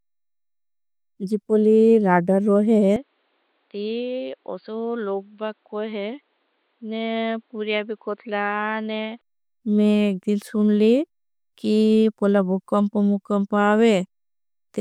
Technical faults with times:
2.96-9.21 input switched to a poorer device

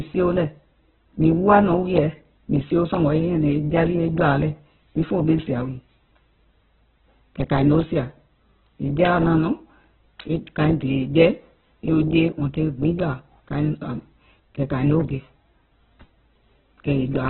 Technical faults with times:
0.00-17.29 Opus compression

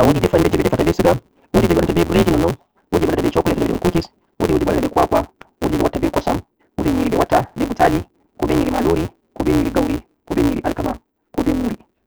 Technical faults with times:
0.00-12.06 block size mismatch (truncated)

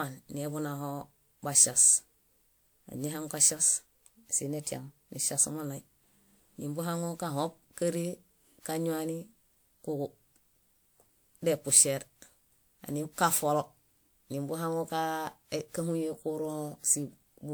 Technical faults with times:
0.00-17.53 generation loss

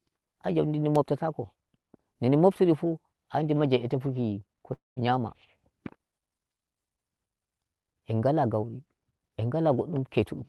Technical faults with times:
4.73-4.98 call audio freeze
10.19-10.45 jitter buffer speed-up

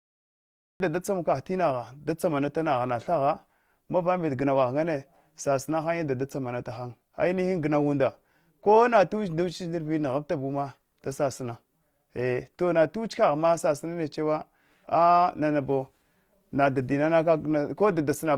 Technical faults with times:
0.00-18.37 Opus compression
0.00-0.80 cut-off start

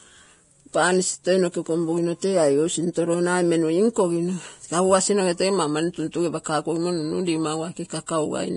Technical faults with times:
0.00-8.56 Vorbis compression
6.44 pre-echo
8.06 pre-echo

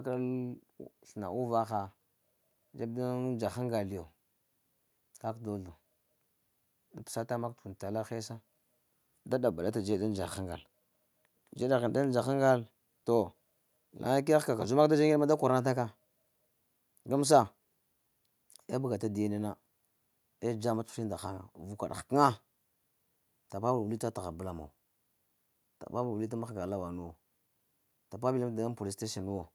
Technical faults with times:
none

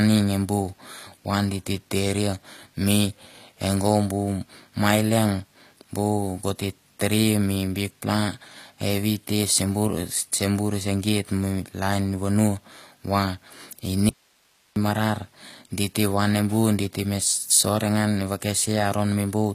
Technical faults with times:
0.00-19.54 HE-AAC compression
14.09-14.76 audio dropout to a faint residue

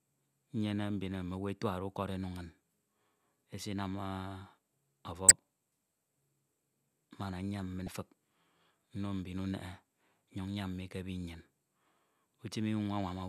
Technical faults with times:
5.28-5.31 damaged data in a compressed stream
7.85-7.88 damaged data in a compressed stream

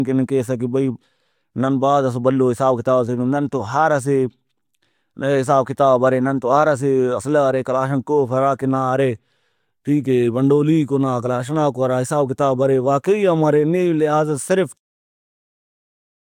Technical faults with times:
none

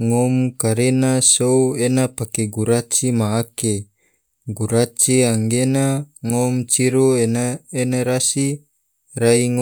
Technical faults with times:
none

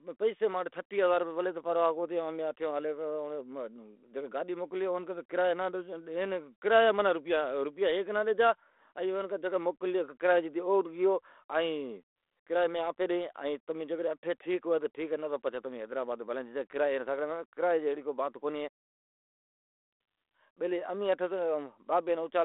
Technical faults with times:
none

